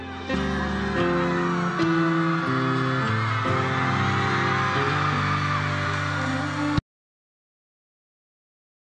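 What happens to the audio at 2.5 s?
At 2.46 s there is damaged data in a compressed stream: part of the encoded audio is corrupted, so the decoder can't parse the frame at that point. It misreads the bad data, loses its place in the stream, and has to hunt for the next valid frame header before normal decoding can resume. What comes out is a very brief chirp or blip, over in well under 20 ms.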